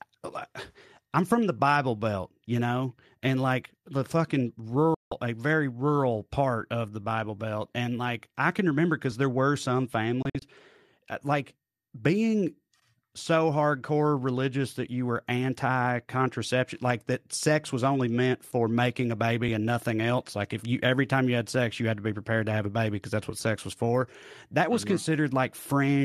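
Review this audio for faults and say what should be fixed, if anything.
Digital broadcast dropout at 4.94 to 5.12 s: after "and like the fucking", the receiver mutes with a 3 ms fade, losing 168 ms before "a very rural part".

Digital broadcast dropout at 10.22 to 10.42 s: after "there were some", short muted holes totalling 96 ms are scattered over 192 ms, the longest 48 ms, as failed frames are discarded.

Underrun with held sample at 9.12 s: after "like I can remember", the output buffer empties and the converter holds its last value flat for 1.33 ms. Playback then resumes where it stopped, so the break is soft.

Better reception or error protection on the broadcast link, plus a larger output buffer, would prevent these.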